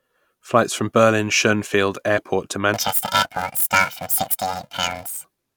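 From 2.74 to 5.25 s, planar audio read as interleaved plays each 2.67 ms block's channels in turn at double speed, producing a robotic 375 Hz buzz.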